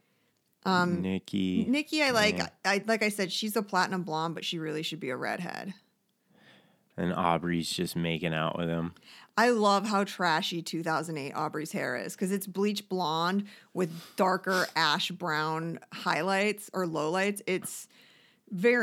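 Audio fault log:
2.07, 3.81, 5.34, 11.42 and 16.94 s: dropped samples. Each gives one sharp click, likely from a fraction of a millisecond missing, so the waveform jumps abruptly.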